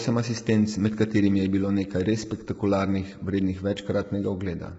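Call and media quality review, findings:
Speech rough and grainy throughout the whole clip. Likely low-delay AAC compression (AAC-ELD type) at a low bitrate, sounding like around 16 kbps. Short frames resolve pitch harmonics poorly, and coarse quantisation leaves noise in the gaps between them. Heavy damage. Spectrogram shows smeared, fuzzy harmonic stripes, speckled noise filling the spaces between them, and a flat, empty band above 7.7 kHz.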